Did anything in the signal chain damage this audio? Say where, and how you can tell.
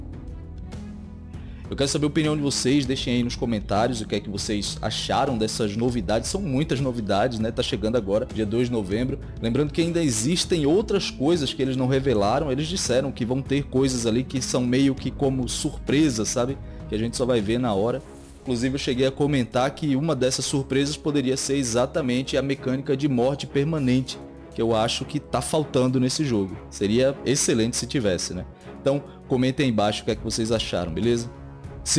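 Yes: aliasing at sample-rate conversion, throughout. Unfiltered content folds back around 11 kHz, consistent with a 22 kHz rate, giving gritty, inharmonic tones roughly 25 dB down, unlike a clean low-pass roll-off.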